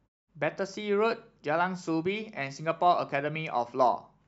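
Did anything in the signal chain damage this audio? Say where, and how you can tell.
No, nothing in this speech stood out on listening as damage from any stage of the chain.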